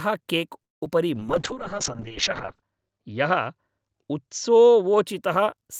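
At 0.62 s the speech stops dead for about 0.2 s and goes silent. This call audio freeze likely comes from delayed packets draining the jitter buffer. Speech resumes at 0.83 s.

At 0.85 s comes short concealed packet loss. About 20 ms never arrived. The gap is patched by extending the previous sound, which leaves a brief smear.

From 1.15 s to 5.11 s a call bitrate drop takes hold. The rate falls from 48 to 7 kbps, staying lowest for 1.4 s. Coarser coding sounds rough and watery. The top end shrinks from 20 kHz to 8 kHz, so the speech sounds muffled.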